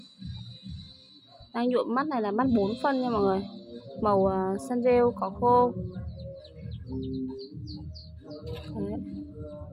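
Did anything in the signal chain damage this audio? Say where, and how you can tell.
No, nothing in the signal chain has audibly damaged this audio. There are no dropouts, glitches or distortion that would point to any stage between capture and playback.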